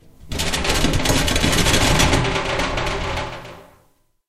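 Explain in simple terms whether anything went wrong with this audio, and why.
Nothing went wrong that I could hear; no moment in the recording stood out as a problem.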